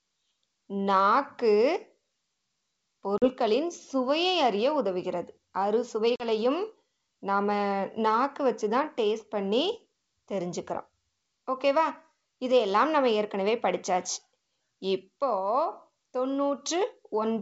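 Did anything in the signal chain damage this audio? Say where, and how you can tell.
Yes, the network stage damaged it. At 3.18 to 3.30 s and again at 6.16 to 6.29 s the speech drops into a hard-edged silent hole, then comes back slightly distorted before settling. That is packet loss on an ADPCM call: about 40 ms of audio, a couple of packets, went missing each time. Because the G.722 decoder's adaptive predictor and step size stop tracking the sender's, the first few tens of milliseconds after each gap are distorted.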